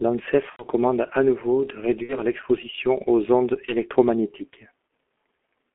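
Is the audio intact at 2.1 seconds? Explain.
No. From 2.03 to 2.16 s there is VoIP packet loss concealed by the speech codec. About 60 ms of audio went missing, which fits two dropped 30 ms frames. The decoder filled the gap by repeating its last pitch and filter settings while stepping the level down, so the sound turns into a smeared, buzzy tone that fades, and stays weak briefly after real data resumes. On a spectrogram, the harmonics run flat and unchanging across the gap. On a waveform, a repetitive stretch tapers in amplitude.

That moment also carries the G.723.1 codec, which runs through the whole clip. Its damage is heavy, and the sound points to a bitrate of about 6.3 kbit/s. The line band runs from 250 Hz to 3.4 kHz, so the speech is muffled and hoarse and the consonants are blurred. The slow frame-by-frame model updates smear fast transitions. A spectrogram shows nothing above 3.4 kHz and little below 250 Hz, with formants that look coarse and blocky rather than smoothly moving.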